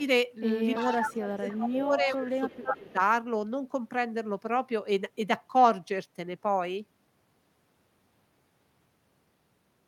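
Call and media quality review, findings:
Echo leak at 0.74–1.15, 1.34–1.56, 2.03–2.27 and 2.48–2.93 s. A copy of the speech arrives 332 ms late, about 10 to 25 dB down. It shows as repeated formant traces offset on the spectrogram. Likely a far-end canceller residual.

Speech suppressed in double talk at 0.84–2.42 and 2.58–2.98 s. Speech dips by up to roughly 15 dB, showing as notched waveform envelope. Likely overactive suppression during overlap.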